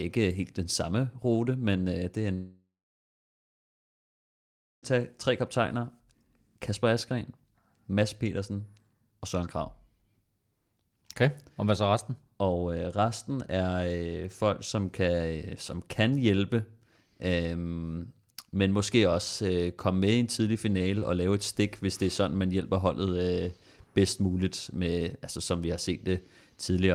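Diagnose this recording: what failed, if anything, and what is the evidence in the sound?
The network stage likely suffered a long dropout. After "men øh det er" at 2.33 s the speech smears into a fading buzz or hiss, then about 2.15 s of silence, returning at 4.85 s with "tage tre kaptajner" and about 2.5 s of speech gone.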